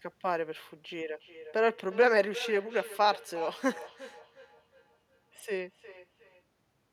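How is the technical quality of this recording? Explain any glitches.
The quality suffers from one fault. Feedback echo between two devices runs from 1.04 to 6.45 s: a second device replays this microphone's sound, which is recaptured, so each phrase returns roughly every 400 ms, thinner and ringing, peaking at about -17 dB below the speech.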